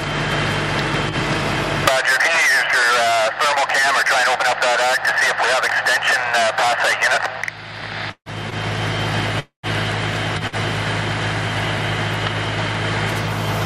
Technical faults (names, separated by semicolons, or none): call audio freeze; short stall from a late packet